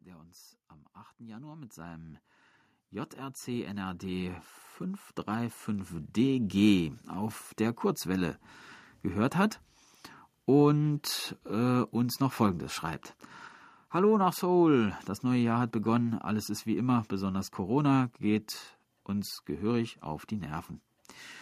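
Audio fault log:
1.19–9.33 s, automatic gain rising: just after "uns am", the level climbs steadily by about 16 dB over roughly eight seconds, with the voice and the room noise swelling together. The gain control judged the input too quiet and kept raising its amplification. Because the noise floor lifts along with the speech, this is a gain change rather than a closer talker. Its slow one-way climb also sets it apart from compressor pumping, which rises and falls quickly around each phrase.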